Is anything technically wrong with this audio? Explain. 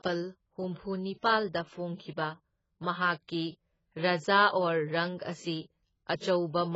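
Yes. Throughout the clip the speech sounds dull and smeared, with nothing above about 7.7 kHz and a warbling, fizzy edge on sibilants. This is likely heavy AAC compression at a very low bitrate, such as 16 kbps AAC-LC, trimming the top band and coarsely quantising the rest.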